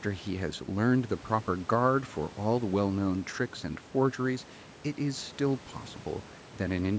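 No technical faults can be heard anywhere in the speech. The call microphone processing leaves nothing above 8 kHz, and the room noise sits about 24 dB below the speech.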